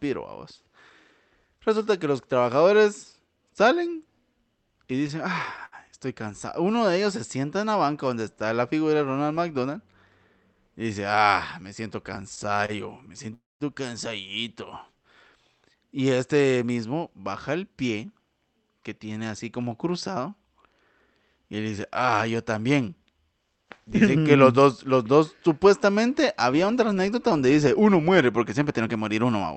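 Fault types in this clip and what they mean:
Scattered short gaps: A few packets arrived lost or late, and the receiver patched each by extending the last sound, leaving about four brief ticks or smears, none longer than about 70 ms.
Short stall from a late packet: One packet missed its slot and the jitter buffer ran dry, so the sound near 12.7 s is held 29 ms too long before continuing.
Call audio freeze: Near 13.3 s the sound holds as a fading buzz, then about 200 ms of silence, adding 265 ms of gap, likely from delayed packets emptying the jitter buffer.
Jitter buffer speed-up: Excess buffered audio was trimmed by cutting out tiny pitch-period slices, so three stretches of the speech run 5 to 10% faster at unchanged pitch.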